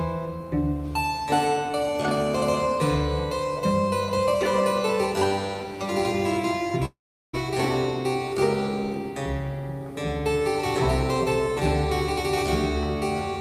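From 6.85 to 7.35 s the sound decays into a fading buzz, then silence; a long network dropout likely lost 0.48 s of audio.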